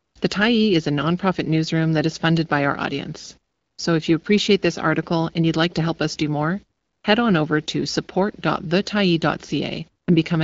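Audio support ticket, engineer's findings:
No faults found in this speech recording. AMR wideband (HD Voice) path audible: band-limited to about 7 kHz at 12.65 kbit/s, with only light codec colouring.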